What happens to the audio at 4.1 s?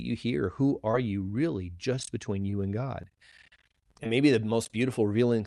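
Just before 4.1 s, from about 4.04 to 4.07 s, there is a short concealed packet loss. Around 20 ms of the speech failed to reach the decoder in time, which fits one lost 20 ms packet. The receiver patched the gap by extending the preceding sound for about 14 ms, then crossfaded back into the real signal. It comes across as a brief smear or wobble, and a quick consonant there may drop out.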